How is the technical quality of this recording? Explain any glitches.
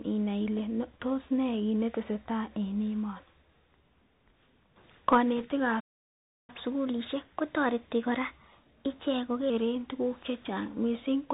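The recording has poor technical quality, with four distinct problems in the speech.

Bluetooth CVSD headset codec, throughout: the sound is squeezed into a narrowband channel, as expected from a one-bit-per-sample delta coder running at a 64 kbps rate. A spectrogram shows nothing above 4 kHz. Loud, bright sounds overshoot the adaptive step, s sounds come out scratchy, and a grainy hiss sits under everything.

Bit errors on a Bluetooth voice link, 5.37 to 5.45 s: for under a tenth of a second, a rushing crackle is added to the speech. It points to an error rate of around two percent. Each flipped bit nudges the signal only slightly, so there are no sharp clicks. On a spectrogram, the burst appears as a brief smear of broadband noise.

Playback stall, 5.80 to 6.50 s: the speech cuts off mid-flow and there is about 0.68 s of silence before it resumes. The likely cause is a player that ran dry of buffered data or had its thread blocked. 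The waveform shows a flat gap, and the spectrogram shows an empty vertical band.

Catch-up at higher speed, 6.50 to 9.50 s: after the stall, playback runs 1.1 times faster to recover the lost time, with pitch raised by about a semitone and a half. Resampling the backlog causes both shifts. On a spectrogram, harmonics sit slightly higher and syllables look compressed until 9.50 s.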